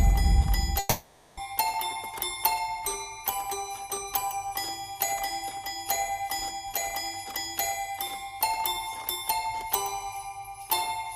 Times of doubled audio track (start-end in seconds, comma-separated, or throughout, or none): none